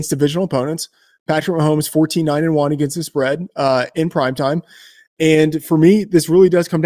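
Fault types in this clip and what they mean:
No technical faults can be heard in this speech recording. Nothing in the audio points to a problem in how it was captured, transmitted or played back.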